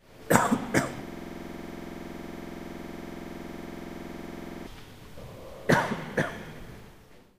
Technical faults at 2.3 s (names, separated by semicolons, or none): system hang loop